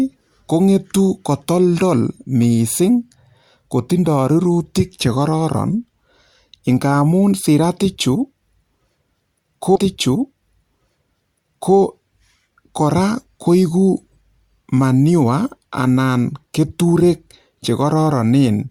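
A speech recording in which a stream segment is repeated: from 9.75 s to 11.75 s, two seconds of the programme play a second time, adding 2 s to the running time. A small blip marks the jump back. This isn't a brief stutter or a dropout: a whole block of audio plays again in order, as happens when the player fetches or queues the same segment twice.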